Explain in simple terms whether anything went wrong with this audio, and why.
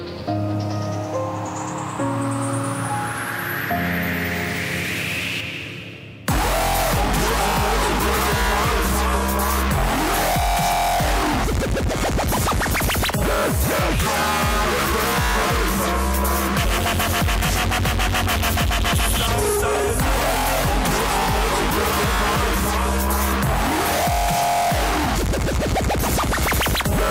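Nothing went wrong with this recording; the signal carries no technical faults.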